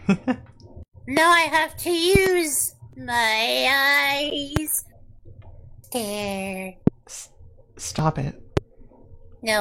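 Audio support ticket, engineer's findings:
Loud pops at 1.17, 2.15 (a double, through 2.29), 4.56, 6.87 and 8.57 s. Sharp thumps about 20 dB over the sound, which keeps running underneath. Likely a voltage spike from a plug, switch, static or driver.

Blocks of digital silence at 4.30 s (about 11 ms, fits a 512-sample buffer) and 8.23 s (a tick, fits 128 samples). Hard cuts to silence and back, so the output buffer likely missed its deadline.

Overlap between stream segments at 7.99–8.02 s. Roughly 30 ms drops out and the waveform jumps, a small skip that suggests a 2 s segment boundary with clashing timestamps.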